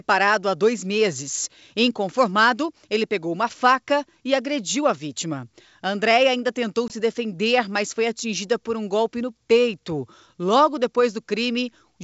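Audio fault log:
6.88–6.94 s, packet loss on an ADPCM call: a hard 20 ms gap, about one packet, then speech returns slightly off while the decoder's predictor and step size resync.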